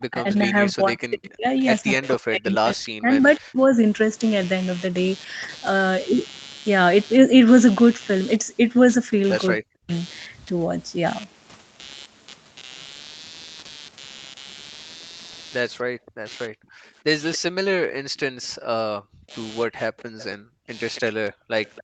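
A buzz runs under the whole recording. It pulses at around 150 Hz and sits roughly 25 dB below the speech. This is computer activity noise. The processor, graphics card or mouse changes its load, and that shifts the ground the audio circuit shares with it. The buzz follows the machine's activity, not the speech. It keeps going through the pauses as well.

From 0.0 to 3.78 s the speech keeps dipping and breaking up. About two seconds of that span are affected. At the deepest points the level falls by around 40 dB. The likely cause is speech suppressed in double talk. Both sides spoke at once. The echo canceller could not tell this talker from the echo of the other side, so it turned everything down.

Between 1.27 and 2.08 s a faint second copy of the speech trails behind the original. It arrives 277 ms late and sits about 25 dB down. This is likely an echo leak. The far end plays the call on a loudspeaker, and its canceller let some of that sound back into its microphone.

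From 9.66 to 9.91 s there is a second, brief double-talk dip. It covers about 0.2 s and again falls by around 40 dB.

Between 15.95 and 18.1 s the room sound drops away in short bursts, about half a second in total. The deepest drop is about 32 dB. This is background gated by the echo canceller. It clamped the microphone hard while the loudspeaker was playing, then let go. An echo leak overlaps it from 16.06 to 17.38 s, with the same 277 ms delay and a level about 20 dB down.

From 16.24 to 21.56 s the speech is cut back again in pieces, about 0.7 s in all, by up to roughly 35 dB. The echo returns from 20.0 s to the end, about 25 dB down. Throughout, the audio stops at 8 kHz, as the call path's bandwidth allows.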